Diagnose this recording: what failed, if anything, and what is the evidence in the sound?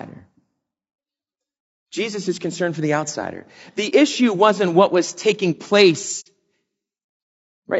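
Throughout the clip the speech sounds rough and grainy. There is a noisy haze between the harmonics, and the upper band sounds thin and somewhat synthetic. This points to the codec stage, most likely low-delay AAC compression such as AAC-ELD, at a rate that fits about 32 kbps. Its short frames resolve pitch harmonics poorly and consume bits quickly, so at this rate the encoder fills gaps with noise and reconstructs the top band coarsely, and the damage is plainly audible.

At 3.89 to 3.93 s and again at 6.20 to 6.27 s, the sound fades briefly into silence and back. These soft-edged holes are AAC frame loss with muting, in the network or transport stage. The decoder received nothing for those frames and zeroed their spectrum, and the overlapping windows smeared the edges into short fades. The first gap fits one lost frame of about 30 ms, and the second fits two consecutive frames, about 60 ms.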